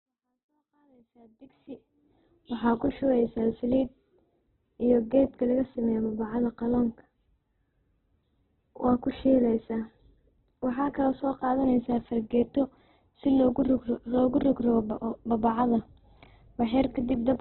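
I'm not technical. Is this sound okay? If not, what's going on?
No. The speech was most likely squeezed very hard by Opus compression, a system that shrinks audio to save space. Given too little room, it dropped everything above 4.2 kHz and filled gaps with rough guesses. So the voice sounds muffled and telephone-like, with a grainy, rough edge from start to finish. The gentle fade-in from the start up to 2.1 s is a normal edit, not a fault.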